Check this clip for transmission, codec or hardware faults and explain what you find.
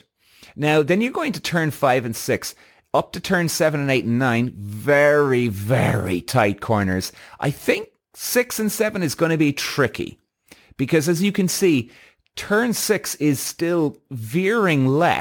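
I checked this clip and found nothing to explain.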